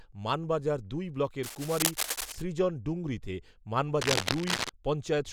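After "মানবাজার দুই", from 1.43 to 2.43 s and again from 4.01 to 4.70 s, cable scratch noise adds dense, uneven scratching over the speech. The first burst is slightly below the speech level and the second is about as loud as the speech. The likely cause is a worn connector whose contact resistance fluctuates as it is moved.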